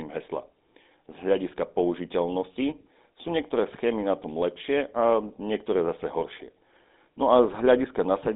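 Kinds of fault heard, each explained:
GSM full-rate codec: The speech has been through the original GSM mobile coder, which keeps a crude vocal-tract model and drives it with a sparse, regularly spaced pulse train that keeps only every third sample of the excitation, at a rate that fits the 13 kbps full-rate scheme. Throughout the clip this gives a plainly audible buzzy, gravelly roughness, and the band is held to roughly 200 Hz to 3.7 kHz, so the sound is thin and muffled with nothing above that ceiling.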